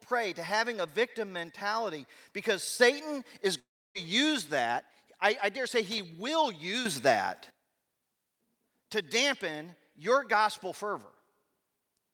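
The clip is speech, and it carries two sudden gain jumps, a long network dropout and a burst of loose connector crackle. Just after "a victim mentality because", at 2.80 s, the level steps up by about 5 dB from one sample to the next, with speech and background noise rising together. It holds until 4.79 s, where it drops back just before "I I dare say". The likely cause is a digital gain change applied without a ramp. Inside that raised stretch, from 3.59 to 3.98 s, the likely cause is a long network dropout. About 360 ms of audio never arrives. The receiver stretches the last sound into a fading buzz, which thins into near silence before the speech returns further on with the lost section gone. Shortly after "I I dare say", from 5.92 to 5.99 s, there is an irregular scratchy burst of crackle. A worn or dirty contact making and breaking would chop the signal this way, with pops from any DC on the line. 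The second sudden gain jump is larger. At 6.85 s the level leaps by about 12 dB, lifting speech and noise floor together as one block, and at 7.50 s it falls back just as abruptly. This is again likely an unramped gain setting or bit shift in the digital path.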